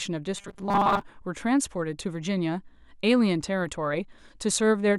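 From 0.37 to 1.02 s this speech clip turns into a rigid, metallic buzz pitched at 200 Hz that only loosely tracks the talking beneath it: robotic sound from repeated short buffers. The likely cause is audio arriving too seldom, so playback keeps looping the last fragment, here about 5 ms long, to fill the gaps. That fixed loop length imposes the 200 Hz tone, and with most of the stretch made of repeats, the real audio in between is skipped.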